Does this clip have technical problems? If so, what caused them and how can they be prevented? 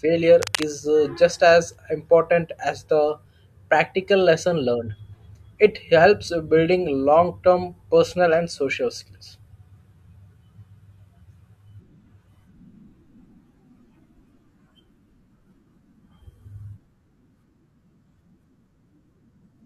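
Yes. From 0.42 to 0.67 s, just before "uh just as important", there's a burst of cable scratch noise, a rough rustling only about 10 dB under the speech. It's likely a worn cable or connector being moved, with its contact resistance jumping around. Replacing tired leads and taping cables down so nothing shifts mid-take should prevent it.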